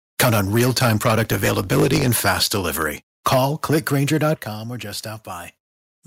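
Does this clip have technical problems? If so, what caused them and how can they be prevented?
Yes. From 0.19 to 2.82 s and again from 3.26 to 4.33 s, peaks are flattened with a harsh crackle, about 12 dB and then about 9 dB over full scale. This is likely microphone overload, with input gain set too high for the converter. Prevent it by setting input gain so that loud peaks stay well below full scale.

From 1.22 to 2.08 s, a block size mismatch (truncated) adds a 50 Hz buzz and speeds the sound up 1.07 times without changing the timbre, which fits a stage writing 1024-sample blocks that the next stage reads only partly. Prevent it by matching block sizes between the two stages.

The level drops suddenly by about 4 dB at 3.34 s and by about 9 dB at 4.35 s, just before "or just". This is likely the microphone volume stepping down as automatic gain control reacts to the clipped peaks. Prevent it by disabling automatic microphone gain adjustment and setting the level correctly beforehand.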